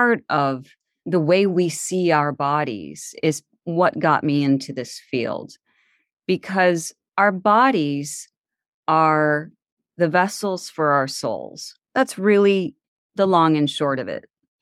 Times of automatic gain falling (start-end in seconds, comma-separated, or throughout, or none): none